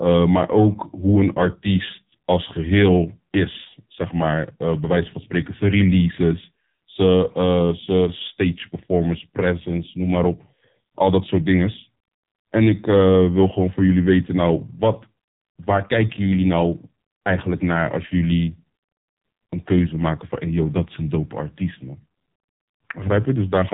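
AMR narrowband mobile codec damage runs through the whole speech clip. The codec works at an 8 kHz sampling rate, so nothing above about 3.8 kHz survives, leaving the voice thin and muffled like a phone call. The damage is heavy, with a buzzy, synthetic edge, which points to a low bitrate mode near 5.9 kbps. At that rate, each 5 ms subframe gets only a few pulses to drive its vocal-tract model, which is too coarse to rebuild natural speech.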